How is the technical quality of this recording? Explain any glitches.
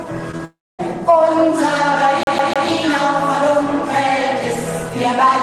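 The recording has clear glitches early on and one stutter near the middle.

At 0.31 s and again at 0.37 s there is short concealed packet loss. About 20 ms of audio failed to arrive each time, and the receiver patched the gap by extending the sound just before it. Each one is a brief smear or wobble in the sound. Because something plausible fills the hole, it passes as a blur rather than a break, which sets it apart from the stutter later on.

From 0.45 s to 0.81 s the audio drops out for about 0.34 s, and the likely cause is a long network dropout. The receiver first carries the last sound forward as a buzz or hiss that dies away. That leaves roughly a quarter of a second of silence before the audio resumes further along, with the gap's material simply gone. Unlike the packet losses, it is long enough to be heard as a hole, and nothing is repeated.

Between 2.23 s and 2.69 s the clip behaves like a CD stuck on one turn. 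The same 0.15 s slice plays three times, each return marked by a short mute where the pickup jumps back. The result is the quick, evenly spaced stutter of a skipping disc. This is what separates it from the network faults. Those lose or invent audio, while this one repeats identical real audio at a fixed rhythm.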